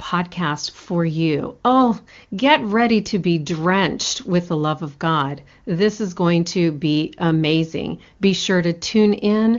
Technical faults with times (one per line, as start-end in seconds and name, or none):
none